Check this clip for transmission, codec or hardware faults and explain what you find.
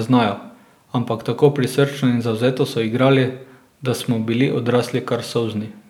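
No faults detected in this clip.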